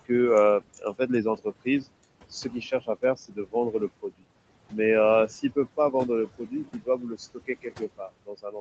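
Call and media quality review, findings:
Noise suppressor artifacts, whole clip: background pumps down by about 21 dB between phrases and creeps back up under speech. Probable component: call-side noise suppressor gating per frame and per band. Room noise sits about 16 dB under speech, so there's plenty for it to chew on. Top end stops at 8 kHz, which fits a narrowish Opus call path.

Speech cut by the noise suppressor, four spots: 0.61 to 1.86 s (a few hundred ms swallowed, up to about 21 dB down), 2.44 to 4.24 s (roughly half a second lost, about 20 dB), 5.28 to 5.94 s (brief dip, about 12 dB), 6.38 s to the end (up to about 18 dB). Soft consonants and endings go faint. Same suppressor is misreading low-level speech as noise and ducking it with the background.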